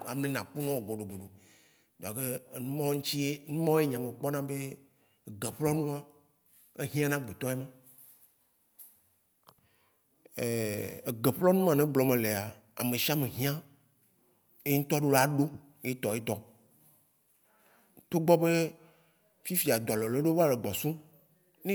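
No technical faults can be heard anywhere in the speech recording.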